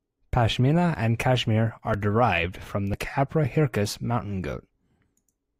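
At 0.95, 1.94 (just before "derived from") and 2.94 s (just after "derived from"), overlap between stream segments trims 5 to 16 milliseconds at one-second segment joins, so the speech skips. The waveform shows an abrupt step, and the spectrogram a thin vertical broadband line.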